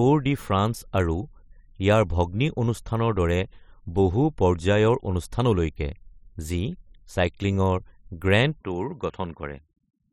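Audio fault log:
8.61–10.12 s, input switched to a poorer device: with no gap, bandwidth narrows to about 7.6 kHz, level drops about 5 dB and new background noise appears about 45 dB down, likely from a change of input device.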